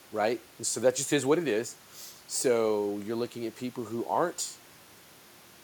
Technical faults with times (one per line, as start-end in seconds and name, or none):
none